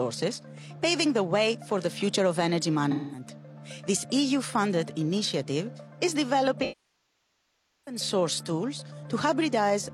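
A smeared, noisy patch from 2.91 to 3.27 s, then a longer one from 6.62 to 8.01 s that decays toward silence before fading back: AAC frame loss with concealment, the decoder rebuilding missing frames from the last good spectrum and fading out as the gap lengthens.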